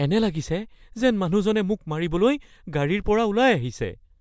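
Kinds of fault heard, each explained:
No technical faults can be heard.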